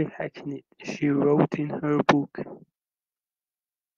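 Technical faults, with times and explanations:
Nothing in this speech recording stands out as a technical problem; there's nothing to flag here.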